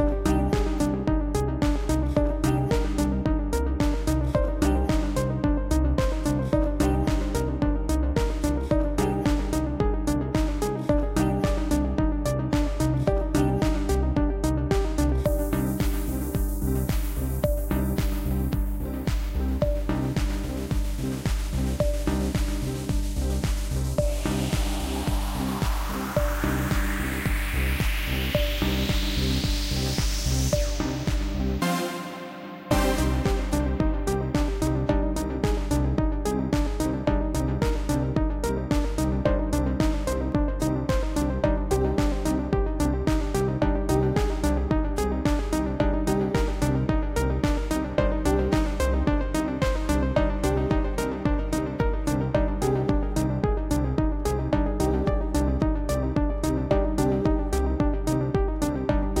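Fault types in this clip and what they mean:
Dropped samples: four isolated sharp clicks at 6.64, 12.63, 15.09 and 40.32 s, each likely from a fraction of a millisecond of samples missing, so the waveform jumps to a later value. No sound is lost, just a thin vertical line across the spectrum.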